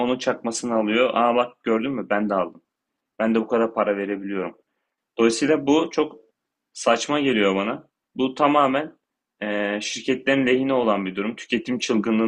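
Listening through this speech recording, nothing stood out as a technical problem at any point.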